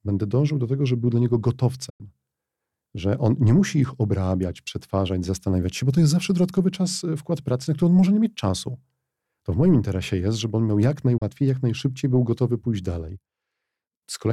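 Around 1.90 to 2.01 s the speech fades out over about 8 ms and goes silent, a digital broadcast dropout where the receiver muted on bad frames. Roughly 96 ms of programme is lost, which fits three 32 ms frames. A shorter hole follows at 11.18 to 11.22 s, about one frame's worth.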